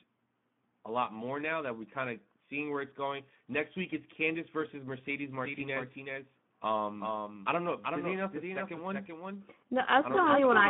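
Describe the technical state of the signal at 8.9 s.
Speex codec damage runs through 8.9 s. Starved excitation coding leaves the speech hoarse, noisy and band-limited to about 150 Hz–3.5 kHz, consistent with roughly 11 kbps. A doubled audio track is also present from 5.42 s to the end, covering 8.9 s. A full-band copy about 5 dB quieter trails by roughly 400 ms with no room colour, likely a second, slower capture path.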